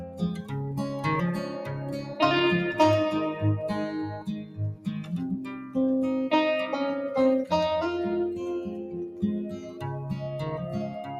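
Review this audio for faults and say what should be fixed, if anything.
A noise suppressor applied to music or sounds stays active throughout. It treats sustained material as noise, so the level swings by roughly 10 dB and pumps.

Sound cut by the noise suppressor occurs at 0.0–0.53 s (about 10 dB), 1.4–2.19 s (about 7 dB), 4.1–4.87 s (about 12 dB), 5.59–5.76 s (about 7 dB) and 9.58–9.81 s (about 6 dB). Held sound sinks there.

To prevent this, switch off speech-oriented noise suppression when capturing or processing non-speech audio.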